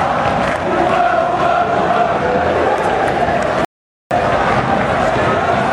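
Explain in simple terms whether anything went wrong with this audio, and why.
Yes, one thing went wrong. At 3.65 seconds the audio stops dead and goes silent until 4.11 seconds, then picks up exactly where it left off. This is a rebuffering stall: playback ran out of downloaded audio and waited about half a second for more. Nothing is missing, but the pause adds time.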